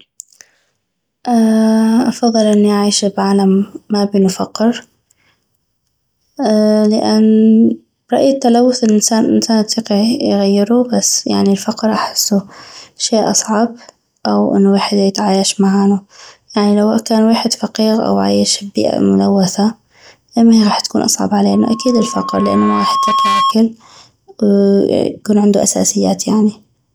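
A microphone picks up the loudspeaker it feeds, and at 1.1 kHz the loop gain passes one. Loudspeaker feedback squeal starts after "ايمهي غاح تكون اصعب" at 21.53 s: a single tone swells over about two seconds to roughly speech level, ending at 23.54 s.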